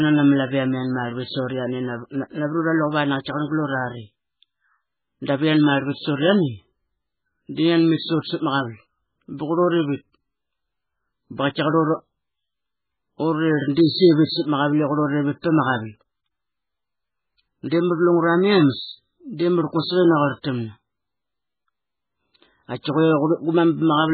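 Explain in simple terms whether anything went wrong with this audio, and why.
Heavy MP3 compression, likely from squeezing the file too hard, removes everything above 4.5 kHz for the whole clip, making the speech dull, watery and swirly.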